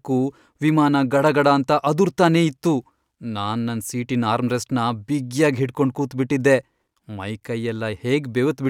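No technical faults are audible.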